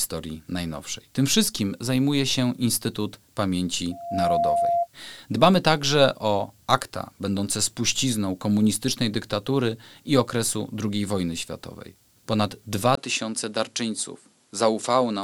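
From 3.91 to 4.88 s a loudspeaker feedback squeal appears: a pure 690 Hz tone swells over roughly a third of a second until it sits at about the same level as the program. A microphone is picking up its own loudspeaker, with loop gain above one at that frequency. At 12.95 s a 20 ms dropout leads into audio that is cut off above 11.4 kHz and carries a new noise floor about 45 dB below the signal, with loudness roughly unchanged, most likely because the input switched to a poorer device.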